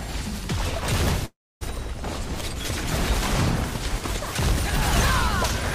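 At 1.25 s the audio stalls in a call audio freeze lasting until 1.63 s. The last moment of sound is stretched into a short, fading buzz, then about a quarter-second of near silence. The audio resumes exactly where it stopped, now running about 355 ms late, with nothing skipped. The likely cause is packets held up in transit, emptying the jitter buffer. A spectrogram shows a smeared, decaying band followed by a blank gap. The waveform tapers, then flatlines.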